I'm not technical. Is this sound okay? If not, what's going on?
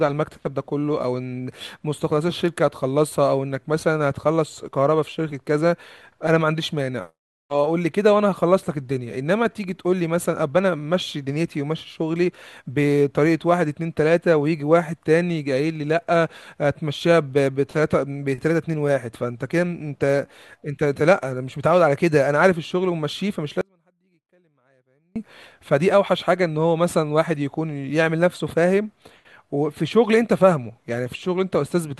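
No. At 23.61 s the speech abruptly drops to a faint trace for 1.5 seconds, an audio dropout to a faint residue, likely a brief signal loss. A natural pause wouldn't cut that sharply.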